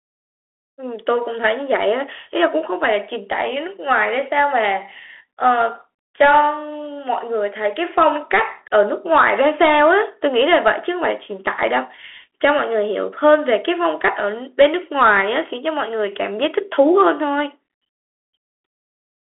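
Throughout the speech, the Bluetooth CVSD headset codec confines the band to 300 Hz to 3.4 kHz, with nothing above 3.8 kHz. Its one-bit delta steps, fitting 64 kbps, lag loud high sounds, so s sounds turn scratchy over a granular hiss.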